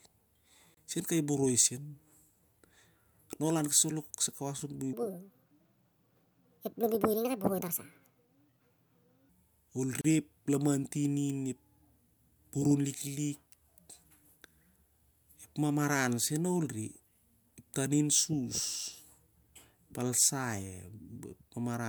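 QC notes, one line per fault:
0.74–0.77 s and 10.01–10.04 s, gap at a join of encoded pieces: brief silences of 27 and 33 ms cut into continuous speech, with smeared edges, from separately encoded pieces joined untrimmed.
4.93–9.29 s, section at the wrong speed: speech runs 1.62 times fast, pitched up roughly seven semitones, sounding high and hurried, likely from playback against the wrong clock.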